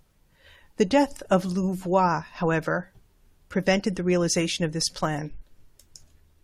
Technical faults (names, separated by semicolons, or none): none